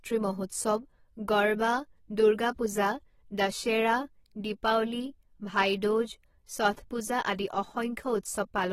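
Throughout the speech, AAC compression at a low bitrate is the likely cause, consistent with AAC-LC running at about 24 kbps and starving its frequency lines of bits. Nothing survives above 16.6 kHz, and the codec damage is plainly audible as a dull, smeared, warbling texture.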